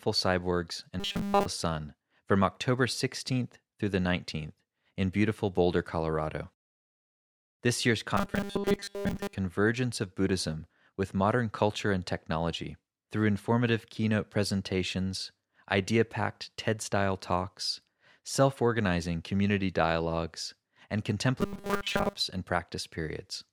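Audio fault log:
1.00–1.46 s, 8.17–9.35 s, 21.41–22.15 s (after "organizing community dialogues and"): robotic sound from repeated short buffers. Audio likely arrived too seldom, so a 5 ms chunk was looped in place of skipped speech, nearly all of the first span and most of the later two. This forces a rigid, metallic 200 Hz buzz.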